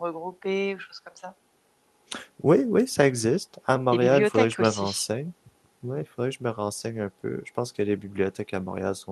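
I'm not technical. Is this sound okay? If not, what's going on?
Yes, no faults: the speech came over a normal internet call link (Opus codec), which trims the very top of the sound above 12 kHz as it ordinarily does.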